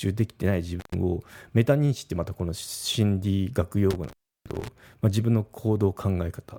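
A loose plug or cable in the signal path briefly loses connection, an intermittent contact, at 0.79–0.94 s and again at 3.90–4.68 s. The speech drops out for about 0.11 s and then 0.33 s, with crackle at each break and faint hiss filling the gaps.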